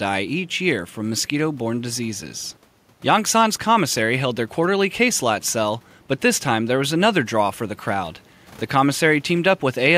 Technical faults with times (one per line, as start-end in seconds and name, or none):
none